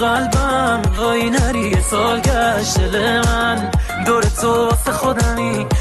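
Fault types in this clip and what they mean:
Skip ahead: at 0.97 to 0.99 s the sound jumps forward with no gap. Roughly a second of audio was dropped while later audio was already queued, so the two sides of the cut are spliced almost directly together.
Jitter buffer speed-up: from 1.31 to 1.82 s, playback runs at 130% speed, then at 105% from 2.98 to 5.75 s. Each stretch trims roughly 150 ms by removing short pitch-period slices, so the sound hurries without its pitch changing.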